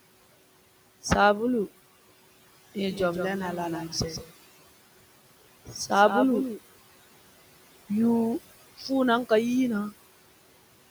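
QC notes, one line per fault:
Throughout, noise suppressor artifacts: the background gets pulled down by about 17 dB in the gaps and swells back up under the speech, from the frame-by-frame band cutting.
2.90 to 6.58 s, doubled audio track: a second full-band copy trails the original by roughly 150 ms at around 10 dB down, with no room tail on it, and it switches on and off abruptly. Likely an extra capture path or an edit leaving two offset copies.
5.65 to 5.91 s, speech cut by the noise suppressor: the suppressor mistook part of the speech for noise and dipped it by up to about 15 dB, around a tenth of a second in total, so those bits sound swallowed and faint; the room noise sits about 18 dB below speech.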